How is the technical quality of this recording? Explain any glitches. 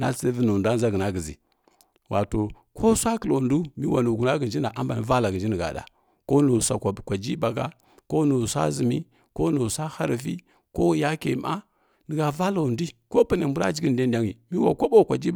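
No glitches or technical faults can be heard here.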